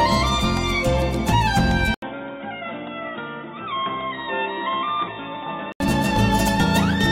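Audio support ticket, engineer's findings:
Dull, boxy sound from 1.94 s to 5.80 s, with an 80 ms gap at switch. Nothing above 3.8 kHz. Level drops by around 10 dB. Faint new background noise. Likely input switched to a poorer device with narrower band.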